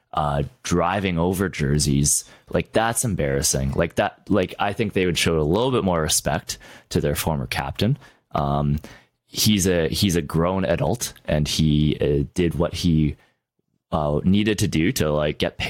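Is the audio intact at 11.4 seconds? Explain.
No. Gain pumping runs through the whole clip, so it is present at 11.4 seconds too. The likely cause is input gain set far too high, with a fast limiter or compressor clamping the level down whenever the speech gets loud and letting it rise again in the pauses. Around 10 dB of swing can be heard, leaving loud and quiet passages squashed toward one level.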